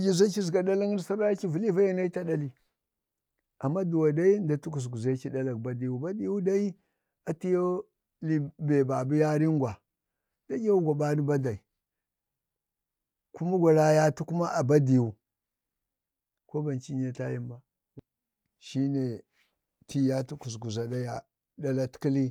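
Speech recording with no technical faults heard.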